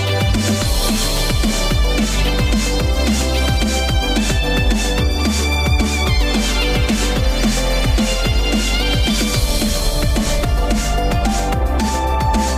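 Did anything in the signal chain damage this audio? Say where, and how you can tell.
No, nothing in the signal chain damaged this audio.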